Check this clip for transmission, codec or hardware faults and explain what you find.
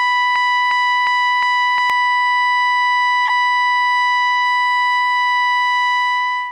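Two faults are present in this music clip.

From 0.00 to 1.90 s there is a broken-record loop, already running when the clip begins: a 356 ms fragment repeats exactly, back to back, four times. The likely cause is a stalled player or stream resending its last buffered piece, so the music that belonged there is lost.

At 3.27 to 3.30 s a corrupt frame was decoded: damaged bits in a few compressed frames were played anyway. Misread codes and gains put energy at wrong frequencies, producing a brief glitch lasting about 30 ms.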